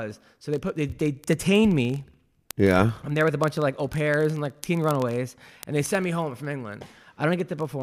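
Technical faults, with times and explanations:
0.11 to 7.81 s, word clock ticks: a steady stream of ticks roughly every 20 ms, around three hundred in all, as an unlocked receiving clock runs roughly a thousand parts per million off the sender and slips one sample each time. The fixed, rapid rate distinguishes them from random clicks or dropouts.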